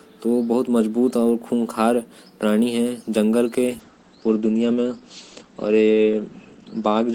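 A call bitrate drop starts at 3.69 s and lasts to the end. The encoder, starved of bits, codes the speech coarsely, in a way that fits a fall from 32 to 11 kbps, and cuts everything above 8 kHz, leaving rough, muffled sound through to the end, at its worst for 2.26 s.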